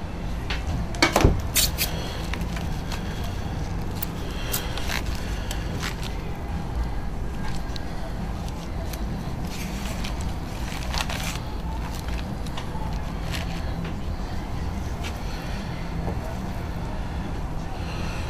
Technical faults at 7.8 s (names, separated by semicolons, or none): electrical switching spike